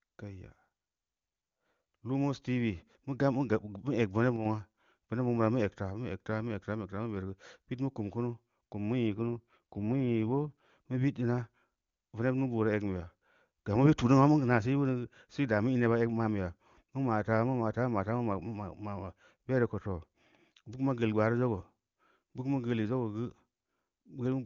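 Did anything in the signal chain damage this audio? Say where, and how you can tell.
Yes. At 4.36 s the level drops abruptly by about 6 dB and recovers at 4.45 s, a 90 ms dip. The likely cause is one channel dropping out in the wiring or interface. After the mono sum, only the surviving channel's half remains.

From 9.16 s to 10.70 s the speech turns rougher and more synthetic. The bandwidth stays the same and there is no gap. This is an AMR rate drop in the network. The AMR-WB codec falls from 23.85 to 8.85 kbit/s, spending bits on error protection, then returns.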